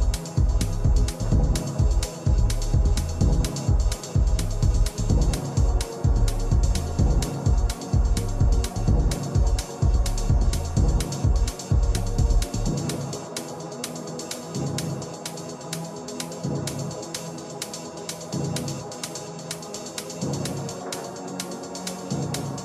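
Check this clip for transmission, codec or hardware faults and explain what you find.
Nothing stood out on listening to this clip.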